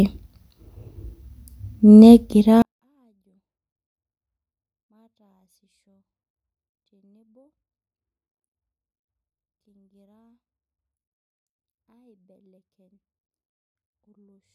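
At 2.62 s the speech suddenly falls almost silent and stays that way to the end. That's a 24-bit alignment error, the too-quiet kind. The samples were packed into the low 24 bits of 32-bit words, but something downstream read them as full 32-bit integers. So every value lands 8 bits too low, about 48 dB down. The speech is still perfectly clean, just barely audible once that step hits.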